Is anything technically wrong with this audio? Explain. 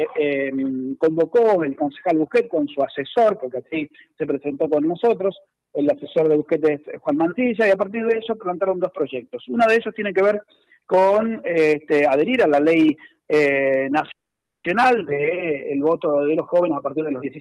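Yes, there are two faults near the end.

From 14.11 to 14.66 s there is a call audio freeze. The sound stops and is replaced by about half a second of fill. Most of it, about 510 ms, is silence. The likely cause is packets held up in transit, so the jitter buffer ran dry. When they arrived, playback resumed where it had stopped. Nothing is lost, but a gap of about 530 ms is inserted.

From 16.20 to 17.38 s there is a jitter buffer speed-up. The audio plays at about 116% speed with no change in pitch, so it sounds hurried. The receiver was holding more audio than it needed. It trimmed many short pitch-period slices in a row to catch up. In total it removed roughly a fifth of a second. Through all of this the call path's upper limit stays near 12 kHz.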